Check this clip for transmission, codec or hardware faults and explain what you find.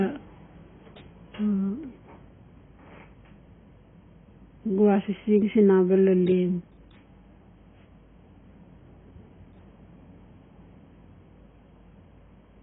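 One codec fault runs through the whole clip. Throughout, nothing sounds above 3.8 kHz and the speech is heavily dulled and smeared, with a warbling, fizzy edge on sibilants. This is likely AAC compression at a very low rate, which fits around 16 kbps, where the encoder lowers its cut-off and coarsely quantises the remaining bands.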